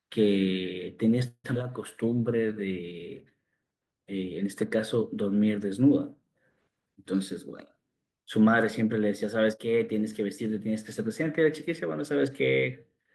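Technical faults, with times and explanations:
1.27–1.46 s, call audio freeze: the sound halts and is stretched into a fading buzz or hiss for about 167 ms, ending in roughly 50 ms of silence, then resumes where it stopped with nothing lost. This is likely packets held in transit while the jitter buffer ran dry.
1.54 s, skip ahead: playback jumps forward, dropping around a tenth of a second of speech, with only a tiny 8 ms fill bridging the join. The stretch was discarded while later audio was already queued, so the two sides meet almost directly.
1.63–2.83 s, jitter buffer slow-down: speech runs at 91% speed with pitch unchanged, as repeated pitch periods add 119 ms in total. The receiver is rebuilding its buffer reserve, which leaves sounds drawn out.
6.80–7.15 s, jitter buffer speed-up: speech runs at 108% speed at the same pitch, with roughly 40 ms cut out in short pitch-period pieces. 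The buffer held more audio than its target, so the receiver trimmed it, giving a briefly hurried delivery.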